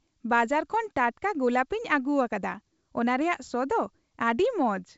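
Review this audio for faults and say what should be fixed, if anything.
Nothing needs fixing: the speech has come through G.722 wideband telephone coding at 64 kbit/s as intended, with its content reaching to about 7.7 kHz and nothing above that, which is the normal upper limit for this path.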